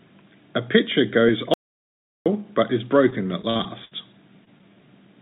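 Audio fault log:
1.54–2.26 s, audio dropout to silence: about 0.72 s drops to silence, likely a lost input, flat-line waveform, blank spectrogram, no room tone.
3.10–3.93 s, repeated packet loss (robotic sound): seven gaps, longest 62 ms, patched by repeating prior sound; spectrogram shows smeared repeated frames, choppy texture.
4.45 s, short concealed packet loss: about 20 ms missing, filled by continuing the last sound; brief smear or wobble, tiny discontinuity in waveform and spectrogram.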